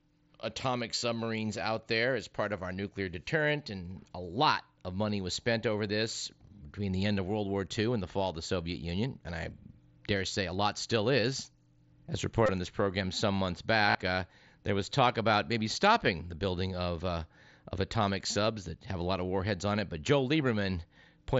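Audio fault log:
0.98–1.02 s, 8.64 s, 12.46–12.49 s, 13.90–13.95 s: concealed Bluetooth headset packet loss, brief buzzy held tones with a slight warble on resumption, where lost headset packets were filled by repeating recent waveform.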